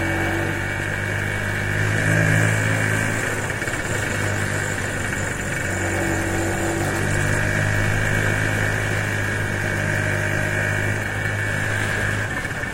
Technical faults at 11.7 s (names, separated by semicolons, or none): none